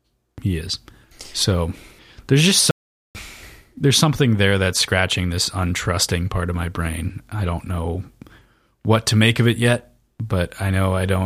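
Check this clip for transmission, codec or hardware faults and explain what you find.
One fault stands out in this speech clip: an audio dropout to silence. Just after "there's just", at 2.71 s, the speech cuts off abruptly and the signal falls to silence, with no room tone at all, until it resumes mid-flow at 3.15 s. About 0.44 s of speech is simply missing. The likely cause is a brief loss of the input, such as a device or link dropping out, while the recorder kept writing silence.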